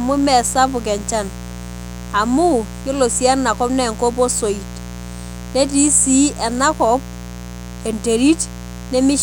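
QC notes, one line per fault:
throughout, mains buzz: a steady, raspy 60 Hz buzz sits roughly 15 dB under the speech. Sharp switching spikes twice per mains cycle spread energy into harmonics reaching several kHz, so it rasps rather than giving the smooth low tone of plain hum.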